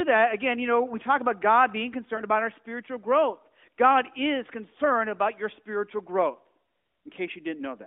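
At 2.16 to 2.23 s there is a lost AMR speech frame. One 20 ms block failed its error check, so the decoder repeated the previous pitch and vocal tract settings at reduced gain. This comes through as a brief dip or warble in the narrowband speech.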